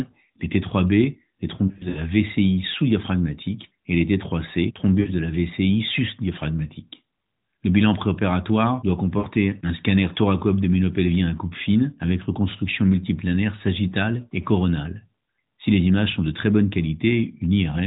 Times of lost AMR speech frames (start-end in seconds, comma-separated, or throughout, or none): 1.68-1.99, 5.00-5.12, 9.18-9.26, 13.88-13.95